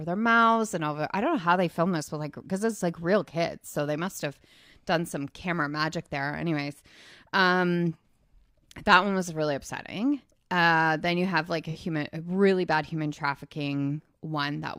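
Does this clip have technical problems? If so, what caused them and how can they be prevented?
Yes. There is AAC frame loss with concealment from 11.70 to 11.77 s, between "you have like a" and "a really bad human". The gap suggests a single lost frame of about 43 ms. The decoder filled it from the last good spectrum, leaving a brief smeared, noisy or phasey patch. Reliable transport with retransmission or forward error correction would prevent it.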